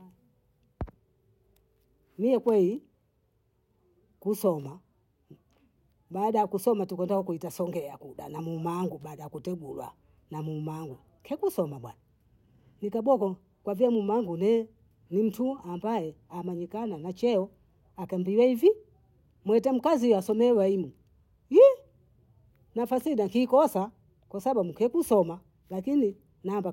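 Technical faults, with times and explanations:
No technical faults are audible anywhere in this speech recording.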